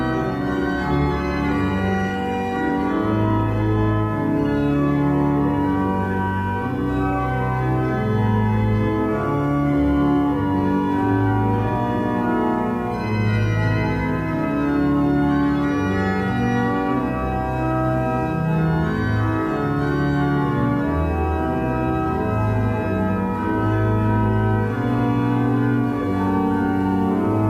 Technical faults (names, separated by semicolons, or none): adaptive stream starting at a low bitrate